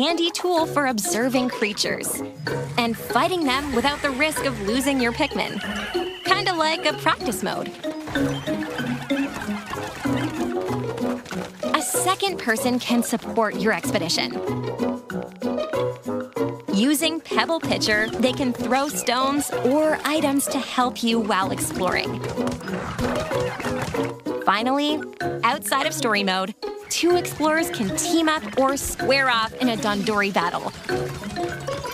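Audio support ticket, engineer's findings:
Train of clicks, 8.75 s to 31.8 s: uneven ticking at about 6.9 per second, around 150 in all, peaking roughly level with the sound. Same-shaped pulses, also present in pauses, unlike random crackle. Likely interference or a faulty connection or power supply injecting pulses.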